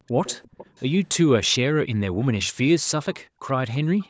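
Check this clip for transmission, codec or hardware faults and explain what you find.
Two kinds of fault are present, both tied to acoustic echo cancellation on a loudspeaker-based call.

Background gated by the echo canceller: from 0.00 to 0.07 s and again from 3.25 to 3.42 s, the room sound drops out abruptly by about 40 dB for under a fifth of a second, then returns. The canceller clamped the microphone hard while the far end was playing.

Echo leak: from 0.07 to 0.83 s, and briefly at 4.00 s, a faint delayed copy of the speech trails the original by 341 ms, about 20 dB down at first and about 30 dB down at the end. The likely cause is an echo canceller that failed to remove the loudspeaker pickup, sending residual echo back. The call's microphone processing, with nothing above 8 kHz, is audible in the band limit.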